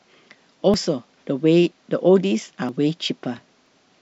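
At 0.74, 2.69 and 3.66 s the speech jumps forward a little, as if a tiny sliver has been snipped out and the two sides butted together with no gap. Each skip loses only a few tens of milliseconds. That's likely audio missing between chunks: the recorder seems to work in blocks of about a second and drops a short piece each time it closes one and starts the next, so the skips land at roughly regular spacing.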